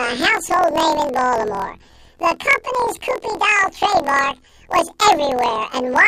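From start to finish the speech has planar audio read as interleaved. Each 24 ms block of left samples followed by right samples is read as alternating pairs, so the speech plays an octave high, twice per block, with a rough flutter at about 41.7 Hz.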